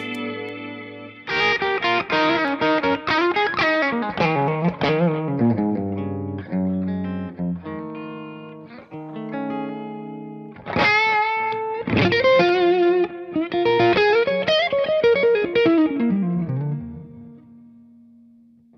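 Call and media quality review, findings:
Regular ticks, one every 2.0 s from 0.49 s to 18.49 s, audible only over signal. Periodic USB or driver dropouts: a recurring bus or driver stall skips a tiny fraction of a millisecond of audio, leaving a splice click.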